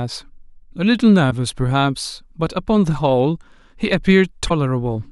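Damaged data in a compressed stream breaks into this speech at 1.27 to 1.32 s and 4.46 to 4.51 s; each time, corrupted frames make the decoder misread them and lose sync, leaving a brief glitch.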